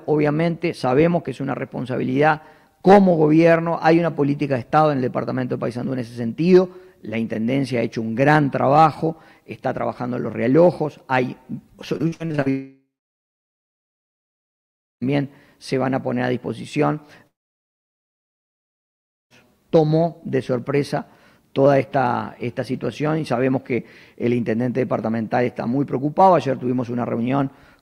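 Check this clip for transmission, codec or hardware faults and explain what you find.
Two kinds of network fault show up here, and they run into each other around the 12-second mark.

From 11.97 to 12.48 s there's repeated packet loss, and it sounds choppy and robotic. A run of short holes, the longest about 59 ms, gets patched by stretching the previous sound, so roughly half that half-second is concealed rather than real audio.

Right after, from 12.50 to 15.03 s, and again from 17.27 to 19.32 s, the audio gives a brief fading buzz or hiss and then near-silence for about 2 s each time. That's likely a long network dropout. Nothing arrived, and playback resumes later with those stretches simply gone.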